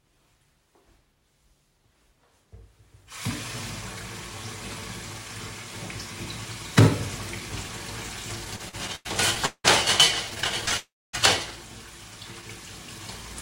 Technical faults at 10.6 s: repeated stalls (stutter)

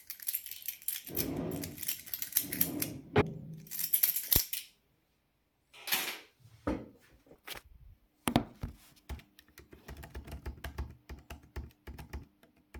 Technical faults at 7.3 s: damaged data in a compressed stream

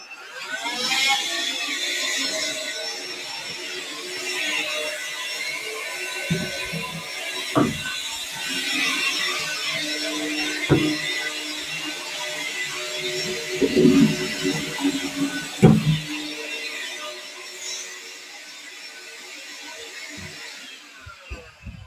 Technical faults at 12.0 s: noise suppressor applied to music or sounds; sound cut by the noise suppressor

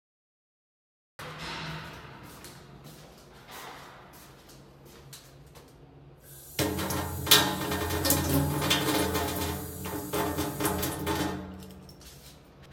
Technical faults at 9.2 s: none

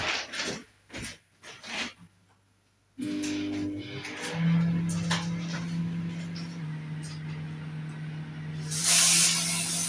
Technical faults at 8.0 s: wrong sample rate

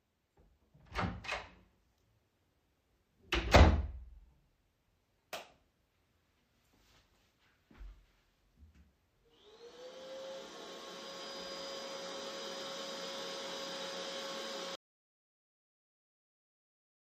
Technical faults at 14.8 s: audio dropout to silence

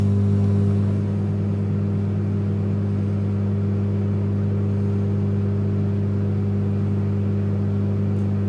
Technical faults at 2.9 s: none

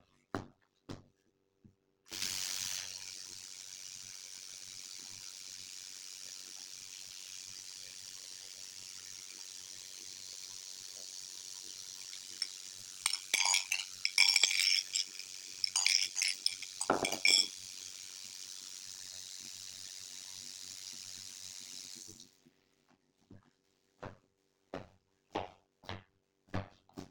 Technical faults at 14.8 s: overlap-add ripple

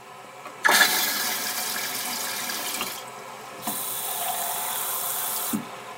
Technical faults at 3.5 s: wrong sample rate

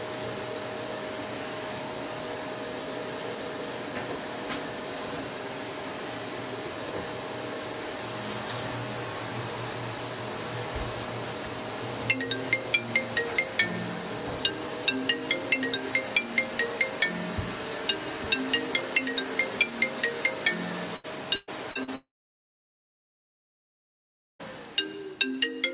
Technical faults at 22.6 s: long network dropout

